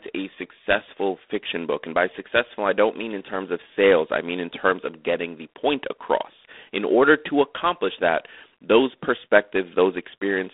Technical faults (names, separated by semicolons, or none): G.726 ADPCM